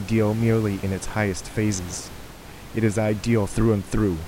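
No technical faults can be heard in the speech. Room noise sits in the background about 17 dB below the speech, part of the recording itself.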